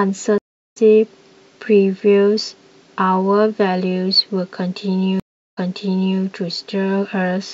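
At 0.38 s and 5.20 s, stream reconnects leave blank 0.37 s waveform gaps; speech then resumes about 0.3 s ahead, and later 0.63 s back.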